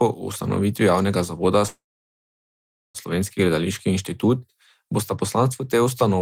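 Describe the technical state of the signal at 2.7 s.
At 2.7 s the signal sits inside a call audio freeze from 1.67 to 2.97 s, likely packets delayed and the jitter buffer emptied after "ustanovitvi javnega zavoda". The last sound fades into about 1.2 s of silence, then resumes intact.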